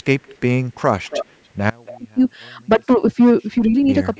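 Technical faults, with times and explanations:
0.26–0.38 s, 1.04–1.26 s, 1.85–1.97 s, 4.15–4.20 s: echo leak, likely a loudspeaker echo canceller letting residue through, so a delayed copy trails by 278–305 ms, faint to fairly strong.
1.70–3.88 s: audio dropout to a faint residue, likely the signal lost while the path stayed open, so 2.18 s drops abruptly to a faint trace about 30 dB down.
1.95–2.20 s, 2.77–3.02 s, 3.58–3.74 s: speech suppressed in double talk, likely the echo canceller ducking during overlap, so the level dips briefly, deeply in the first two, slightly in the last.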